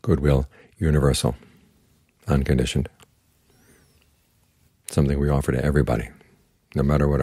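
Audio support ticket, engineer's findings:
Dropped samples, 5.01 s. Likely a buffer handoff in the capture or playback path losing data, roughly a single sample. Waveform jumps straight from one value to a later one, no gap in the sound. Result: one sharp, isolated click; thin vertical line across the full spectrum at that instant. Far too brief to remove any audible material.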